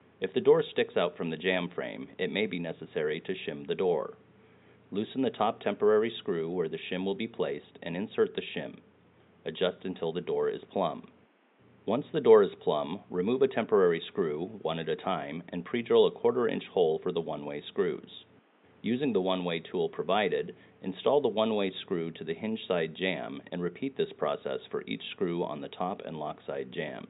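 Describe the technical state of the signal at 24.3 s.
At 24.3 s the signal is intact, with no technical fault present at that moment.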